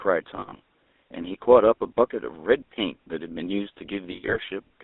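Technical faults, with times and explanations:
throughout: GSM full-rate codec. The sound has a plainly audible buzzy, gravelly roughness, and the band runs only from about 250 Hz to 3.6 kHz. This comes from a coder that models the vocal tract and drives it with a coarse, regularly spaced pulse excitation, which fits a 13 kbps stream.
0.36–0.60 s and 4.12–4.37 s: lost GSM frames. In each stretch of roughly 240 ms, about 140 ms and 160 ms of sound, which fits seven and eight frames, is replaced by a repeat of the last good frame. The result is a held, metallic ring in gaps of up to about 70 ms.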